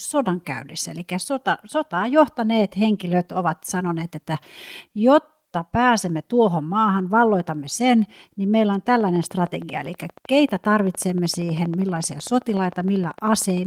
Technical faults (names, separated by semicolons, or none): train of clicks